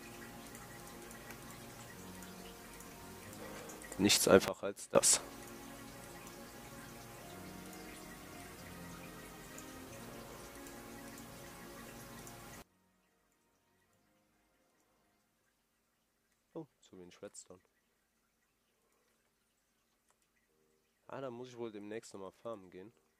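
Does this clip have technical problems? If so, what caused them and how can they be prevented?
Yes. The level drops abruptly by about 18 dB at 4.48 s and returns at 4.95 s, then falls by about 24 dB at 12.62 s and stays down to the end. Sound and background noise shift together, the signature of a sudden gain jump, likely a digital gain setting applied between two samples with no ramp. To prevent it, interpolate every gain change smoothly over several milliseconds.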